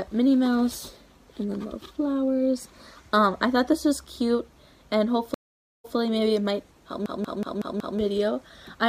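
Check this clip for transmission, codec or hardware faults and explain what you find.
Two faults are audible: a stream reconnect and, shortly after, a system hang loop.

From 5.34 to 5.96 s there is a stream reconnect. The connection dropped, the player fell silent for about half a second, then restarted its decoder mid-stream. The server evidently resent a burst, so the audio resumes about 116 ms earlier than where it cut off, repeating a short stretch. On a waveform this appears as a flat gap followed by a soft fade-in. A spectrogram shows a blank vertical band, then content that partly duplicates what came just before.

From 7.06 to 7.99 s there is a system hang loop. The machine or driver froze while the sound hardware kept replaying the same ring buffer. A 186 ms slice, which fits an 8192-sample buffer, repeats five times at 5.38 Hz. This produces a machine-gun stutter, and about a second of new audio is lost. 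A waveform shows identical blocks tiled end to end, and a spectrogram shows the same pattern stamped repeatedly at even spacing.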